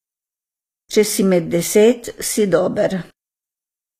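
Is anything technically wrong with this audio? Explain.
Yes, the whole clip sounds like it's been through HE-AAC compression at a low bitrate, likely around 24 kbps. Nothing reaches above 14.9 kHz, and the treble sounds rebuilt from copied lower bands rather than captured, so its harmonics don't line up, leaving s sounds gritty and metallic.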